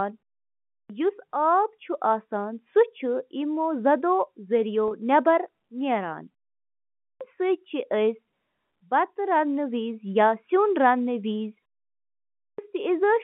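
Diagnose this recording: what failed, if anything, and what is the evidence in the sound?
The playback stage has a clipped start after a pause, where the output device sleeps through silence and wakes late. Three times, after pauses of 0.57, 0.76 and 0.84 s, speech enters abruptly at 0.72 s, 7.03 s and 12.41 s, missing roughly 175 ms of its opening sounds each time. On a waveform the envelope jumps from flat silence straight to full level with no rise. On a spectrogram the onset is a hard vertical edge, missing the energy of the first sounds.

The network stage has packet loss with pitch repetition at 4.88 s, lasting 30 ms, which fits about three lost 10 ms packets. The receiver concealed the gap by repeating the last pitch period, so the sound is held for an instant with a slight buzzy sameness. On a waveform that span shows identical repeating cycles. On a spectrogram the harmonics run dead flat across the gap, inside the narrow 150 Hz to 3.4 kHz telephone band of the G.711 line.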